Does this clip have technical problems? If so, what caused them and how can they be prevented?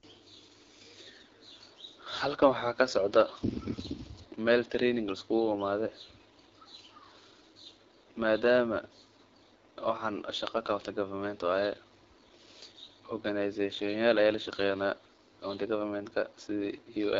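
Yes. The speech carries AMR wideband (HD Voice) codec damage from start to finish. Nothing is present above about 7.7 kHz. The codec models the voice only up to 6.4 kHz, using pulses driving a vocal tract filter, and fills the band above that with shaped noise. The roughness is plainly audible, and the raspy texture points to one of the lowest modes, which fits 8.85 kbit/s. To prevent this, use AMR-WB at 12.65 kbit/s or higher.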